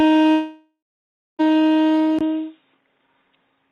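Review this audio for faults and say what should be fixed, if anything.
From 0.31 s to 1.41 s, the audio breaks off. The receiver stretches the last sound into a fading buzz or hiss, then about 0.6 s of silence. About 1.08 s never returns. This is likely a long network dropout. A larger jitter buffer with retransmission would help.

At 2.19 s there is a 20 ms gap. After it, nothing passes above 3.8 kHz, and a faint new noise floor appears, about 50 dB down. The level stays the same. The likely cause is the input switched to a poorer device. Locking the input device would prevent this.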